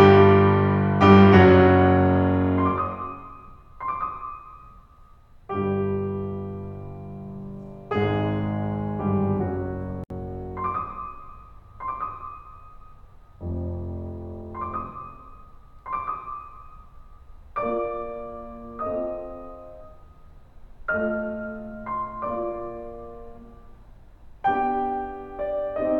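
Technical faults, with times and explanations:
10.04 to 10.10 s, gap at a join of encoded pieces: the music stops dead for about 65 ms and then carries on exactly where it left off, with its edges smeared by the codec, so the truly silent part is shorter. The silence comes from two separately encoded sections joined without trimming, so the encoder's start-up delay and last-frame padding both stay in. Unlike a dropout, nothing is skipped or lost; the silence is simply inserted.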